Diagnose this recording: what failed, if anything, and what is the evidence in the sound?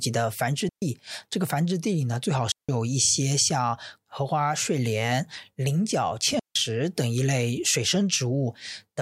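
The failure is in the digital wireless link between microphone and receiver: a digital wireless dropout, occurring three times in this speech, from 0.69 to 0.82 s (about 130 ms), 2.52 to 2.69 s (about 170 ms) and 6.39 to 6.56 s (about 160 ms). Each time the receiver lost too much data and muted behind a very brief fade. The waveform drops to a flat line near zero. On the spectrogram, each is a clean vertical blank band across all frequencies, with no broadband noise bursts at either edge.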